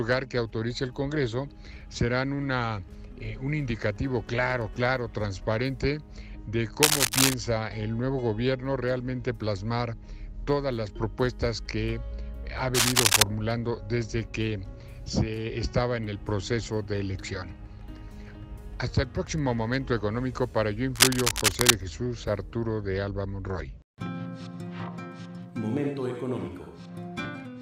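Dense, ragged bursts of scratching and rustling sit over the sound from 6.83 to 7.34 s, 12.74 to 13.22 s and 20.95 to 21.74 s, each about half a second or a little longer and roughly 5 dB louder than the sound itself. This is cable scratch noise, likely caused by a worn cable, connector or control being moved, so its contact resistance jumps around and injects uneven noise into the signal.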